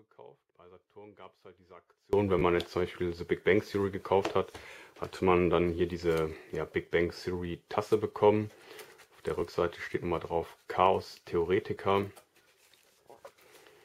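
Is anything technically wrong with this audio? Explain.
Yes, there are three faults. Audio dropout to a faint residue, from the start to 2.13 s: the signal is already missing and only a faint leak about 25 dB down remains, likely from a live path after a break. Bluetooth stutter at 2.39 to 2.42 s and 9.4 s: the receiver replays its last buffer to cover about 27 ms and 13 ms of missing data, which fits two lost packets and then one, heard as a brief repeat.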